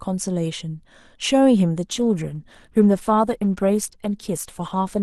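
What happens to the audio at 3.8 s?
At 3.8 s you're in an adaptive stream at a lower bitrate, running from 1.87 s to the end: the connection dipped, so codec artefacts rise, consistent with roughly 64 dropping to 16 kbit/s.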